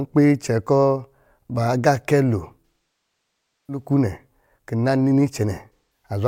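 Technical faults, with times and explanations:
2.66–3.85 s and 5.74–6.09 s, AAC frame loss with concealment: about a second of audio, consistent with roughly two dozen lost frames, is replaced by a repeated spectrum that decays toward silence and fades back. The shorter 0.21 s gap leaves only a brief smeared, noisy patch.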